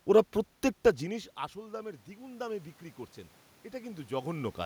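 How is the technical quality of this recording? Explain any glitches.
There's one real glitch, an automatic gain rise. Right after "ওঁরা প্রত্যেকটা", from about 0.99 s to 2.76 s, the level creeps up by about 7 dB. The input had dropped by about 24 dB when the talker moved back from the mic around half a second in. The gain control read that as too quiet and pushed its gain up slowly. Voice and room noise swell together over nearly two seconds.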